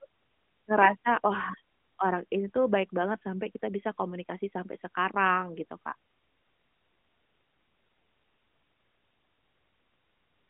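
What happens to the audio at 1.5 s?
Nothing goes wrong at 1.5 s: the speech carries on intact through that moment, heard through the narrow band of an AMR narrowband mobile codec with nothing above about 3.6 kHz.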